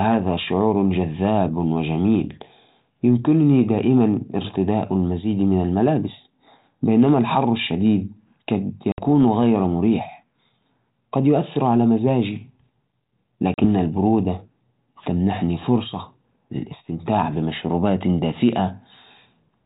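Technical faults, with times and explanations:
8.92 s to 9.02 s and 13.54 s to 13.66 s, packet loss on an ADPCM call: the speech drops into an abrupt silent hole of about 60 ms, then about 40 ms, likely about three and two lost packets of this 4 kHz-limited narrowband call. The speech resumes with brief roughness. The receiving decoder has lost track of the sender's adaptive prediction and step size, and its output distorts for a few tens of milliseconds until they realign.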